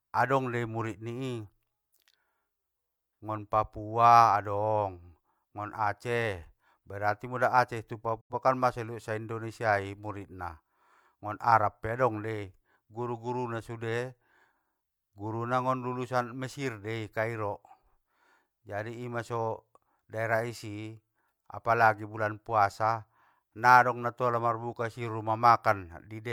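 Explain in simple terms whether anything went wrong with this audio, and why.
At 8.21 s the speech briefly drops out and returns at 8.34 s. This is a digital broadcast dropout: the receiver lost good data and muted, fading out over about 8 ms. The missing stretch, which fits roughly two lost frames, is gone for good.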